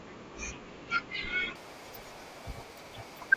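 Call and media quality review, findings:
Wrong sample rate, 1.55 s to end. Speech jumps an octave, plays twice as fast. Playback clock doubled, no resampling, which fits 16 kHz audio played at 32 kHz.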